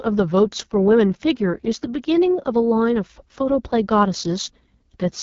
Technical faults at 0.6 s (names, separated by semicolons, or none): AMR wideband (HD Voice) codec